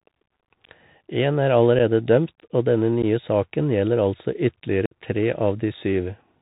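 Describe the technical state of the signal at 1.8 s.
At 1.79 s there is unconcealed Bluetooth headset packet loss. About 7.5 ms of audio, roughly a couple of packets, never arrived from the headset. Nothing filled the gap. The speech drops into a brief hole with abrupt edges that can click.

Underneath sits the Bluetooth CVSD headset codec, with plainly audible damage. The band stops at 4 kHz. The one-bit, slope-tracking coding, which fits a 64 kbps link, lays a granular hiss under the speech. It roughens sibilants and strains on loud high sounds.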